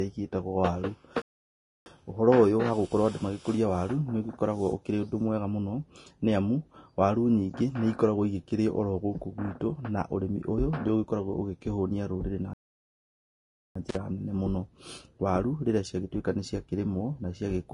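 Vorbis compression runs through the whole clip, most likely from a low-bitrate encode; the damage is plainly audible, in keeping with something around 32 kbps. The cut-off is lowered, and the treble that survives has been quantised so coarsely that its fine detail turns into grainy, hissy noise laid over the speech. Sibilants and consonant onsets lose their edge, and tonal parts of the voice take on a roughened texture.

A playback stall at 1.22 s silences the speech abruptly until 1.86 s, a gap of about 0.64 s. The cause is likely the player starving for data or its thread being held up, so the output simply stops mid-flow and resumes afterwards. A second stall, longer at about 1.22 s, runs from 12.53 s to 13.76 s and breaks the speech off in the same sudden way.

Intermittent contact follows almost at once, from 13.89 s to 13.96 s, about 47 ms. A loose plug or cable opening briefly would account for it: the signal drops out with a crackle at each edge, and for that moment only faint hiss remains in place of the speech.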